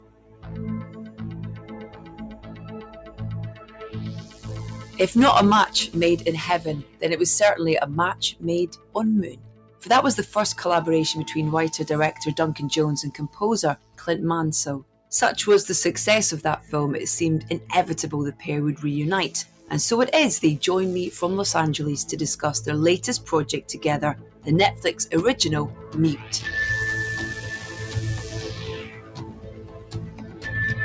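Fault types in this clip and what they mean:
Noise suppressor applied to music or sounds: The level pumps and thins throughout. Held parts and decaying tails sink by up to about 15 dB while attacks come through, because a noise suppressor tuned for speech treats sustained sound and ambience as noise.
Sound cut by the noise suppressor: Steady and fading passages drop by up to about 15 dB, longest from 0 to 7.02 s and 27.34 to 30.51 s, with shorter dips near 8.1, 13.2, 19.4 and 23.2 s, where the suppressor judged them noise.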